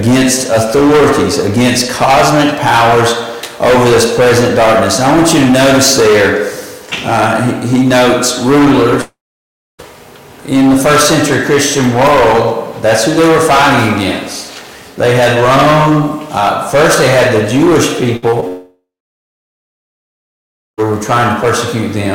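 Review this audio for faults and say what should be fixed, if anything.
Two stretches of audio drop out: from 9.01 to 9.81 s, and from 18.48 to 20.80 s. In each, the last sound carries on briefly as a fading buzz or hiss, then gives way to silence, about 0.63 s in the first and about 1.9 s in the second. The sound returns further on, with roughly 0.8 s and 2.3 s lost. The likely cause is a long network dropout. The long silent tail sets it apart from shorter packet loss, where the fill never reaches silence. Preventing it requires a more stable network path or redundant transmission that keeps audio flowing through outages.

A burst of packet loss hits from 18.17 to 18.24 s. About 60 ms never arrives, and the receiver stretches the preceding sound into a held buzz or fading hiss before resuming further ahead. Unlike the brief smears that follow, it lasts long enough to be heard as a held sound. 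Forward error correction or packet redundancy would recover bursts of this size.

Short concealed packet loss appears at 18.30 to 18.34 s and at 18.40 to 18.44 s. Each gap is about 20 ms, and the decoder papers it over by extending the last pitch or shaped noise, then blends back in. The result is a quick smear or wobble rather than an audible hold, which separates it from the longer burst just before. The cluster here leads straight into the second dropout. A larger adaptive jitter buffer would let late packets arrive before they are needed.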